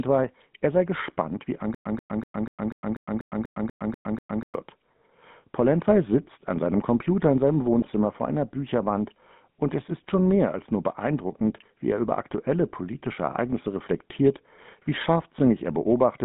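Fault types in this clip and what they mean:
GSM full-rate codec: The speech went through the original GSM coder, which models the vocal tract and excites it with a sparse, regularly spaced pulse train. The result fits the 13 kbps full-rate scheme. Throughout the clip the band is confined to roughly 150 Hz to 3.6 kHz, so nothing above that survives. The coding damage is plainly audible as a buzzy, gravelly roughness over the whole voice.
Stutter with silent gaps: The playback most likely stalled, and each retry replayed the last buffered fragment before running dry. From 1.75 s to 4.54 s, right after "er sei gespannt wie", a 136 ms burst repeats 11 times. Each burst is followed by about 108 ms of digital silence, an even cycle of about 244 ms. Whatever should have been heard during those nearly three seconds is simply missing.
GSM bit errors: Corrupted bits from a weak radio link reached the speech decoder, scrambling its filter, pitch and gain parameters for a few frames. 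Between 7.79 s and 7.90 s, after "in seinem" and before "vor einer", the voice briefly breaks into a squawky, gargling burst with a distorted spectrum. The roughly 0.1 s of damage fits about six consecutive corrupted codec frames.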